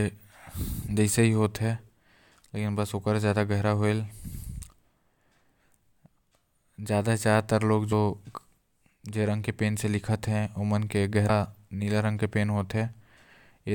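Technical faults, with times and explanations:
7.91 s and 11.28 s: damaged data in a compressed stream. Corrupted bytes make the decoder misread a frame and resynchronise, producing a brief glitch in the speech. On a spectrogram each shows as a narrow vertical disturbance; the waveform has a short discontinuity.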